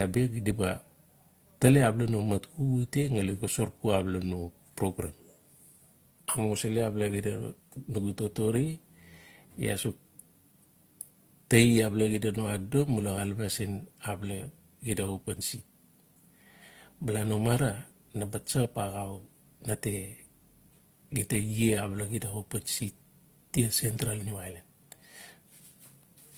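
Throughout the speech, transcoding between lossy codecs, likely HE-AAC then Opus at low bitrates, stacks both codecs' artefacts, leaving their different artefacts layered together.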